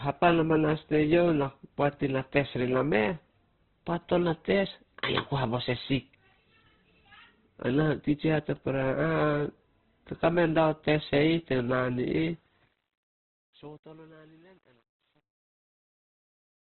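From the start the speech sounds boxed-in and grainy, with nothing above about 4.1 kHz and a rough, noisy texture on every syllable. That's most likely Opus compression pushed very hard, in its music mode at a low bitrate around 12 kbps, narrowing the bandwidth to keep up.

The ending fades out from around 12.3 s to 16.7 s, and from 12.29 s there's truncation distortion on the fade. The level stage keeps too few bits, something like a 9-bit word, with no dither. From 12.91 s to the end the quiet tail turns gritty.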